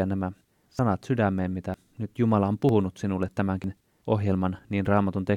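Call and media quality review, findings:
Audio missing between chunks: short skips at 0.79, 1.74, 2.69, 3.64 s, about 50 ms gone each, spliced tight. Likely the capture chunking, dropping audio at 1 s block handoffs.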